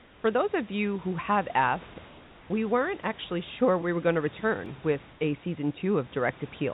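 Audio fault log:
0.0–0.24 s, 2.08–2.5 s and 5.12–5.2 s, comfort noise in place of the background: in these pauses the room hiss, sitting about 26 to 28 dB under the loud parts, gives way to a flat, featureless noise about 2 to 3 dB quieter. This is likely discontinuous transmission, with the receiver synthesising filler noise.
4.66 s, repeated buffer: a tiny slice of about 1.45 ms plays three extra times back to back, giving a brief buzzy click with hard joins. That fits a 64-sample buffer being replayed while fresh audio lagged, and practically nothing is lost.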